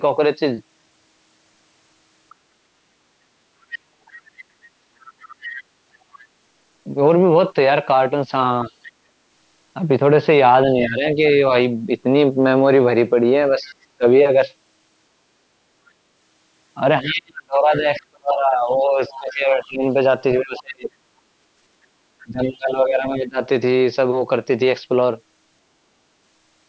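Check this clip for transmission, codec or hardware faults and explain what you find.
Two kinds of fault run through this speech recording, both tied to echo cancellation on a call where the talker's device plays the far end over a loudspeaker. The upper band stops at 8 kHz, consistent with ordinary call processing.

Other side's voice leaking through: A faint second voice appears from 2.3 to 6.19 s, 8.7 to 8.91 s, 13.64 to 13.74 s, 15.86 to 20.62 s and 22.45 to 23.27 s. It sits about 20 to 30 dB below the main speech. The likely cause is residual loudspeaker echo that the canceller failed to subtract. On a spectrogram it shows as a weak, separate harmonic pattern under the main voice, sometimes broken into fragments.

Speech suppressed in double talk: The main voice dips when both sides overlap. From 10.67 to 11.42 s it drops by about 10 dB across roughly half a second. From 13.6 to 14.04 s there is a brief dip of about 20 dB, lasting only about a tenth of a second. 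From 17.02 to 23.39 s it is worst, with cuts of up to about 35 dB totalling around four seconds. This is likely the canceller muting its own talker while the far end talks. The waveform shows sudden envelope hollows, and the spectrogram shows gaps and dimmed upper harmonics.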